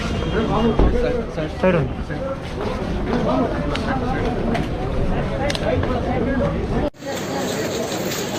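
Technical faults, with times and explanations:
No technical faults are present.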